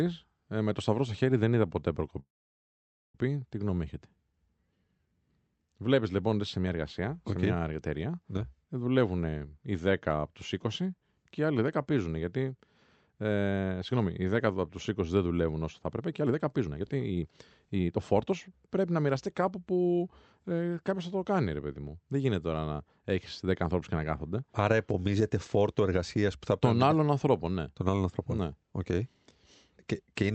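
A speech recording carried over a call link, with content limited to about 8 kHz by the codec, has a call audio freeze from 2.19 to 3.16 s. The sound smears into a fading buzz and then drops to silence for about 0.87 s. Nothing is lost, but everything after it arrives almost a second late, likely because delayed packets emptied the jitter buffer. On a waveform it appears as a flat gap, and on a spectrogram as a blank vertical band. Jitter buffer speed-up follows at 15.85 to 17.23 s (141%, cutting roughly half a second) and at 17.75 to 20.01 s (116%, cutting a bit under half a second). The speech sounds rushed while its pitch stays the same. On a spectrogram the harmonics keep their height while syllables are squeezed closer together in time.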